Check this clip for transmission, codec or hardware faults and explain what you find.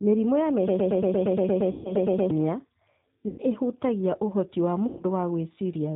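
Three kinds of fault are present: G.729 coding across the whole recording, a broken-record loop early on, and three stretches of VoIP packet loss concealed by the speech codec.

G.729 codec damage is plainly audible from start to finish and fits G.729A at 8 kbit/s. The codec rebuilds speech from a vocal tract filter, a pitch predictor and a sparse pulse pattern in each 10 ms frame, and discards everything above 4 kHz. The speech sounds band-limited, dull and faintly synthetic, with a roughness typical of this kind of parametric-excitation coding.

A broken-record loop runs from 0.68 s to 2.31 s. A fragment about 116 ms long repeats back to back 14 times, identical on each pass, giving a stuttering, mechanical pulse at roughly 8.6 repeats per second. The likely cause is a stall in the player, encoder or stream that kept resending the last fragment it held. Whatever speech belonged in those 1.6 seconds is gone.

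VoIP packet loss concealed by the speech codec occurs at 1.71 to 1.93 s (140 ms lost, falling within the loop), 3.28 to 3.41 s (100 ms lost) and 4.87 to 5.03 s (120 ms lost). Each gap corresponds to several consecutive 20 ms packets. In each gap the decoder extrapolates from its last pitch and filter state while reducing the gain, so the sound smears into a buzzy tone or coloured noise that fades rather than dropping to silence. Because each frame's state builds on the previous one, the speech stays weak or distorted for a short time after real packets resume.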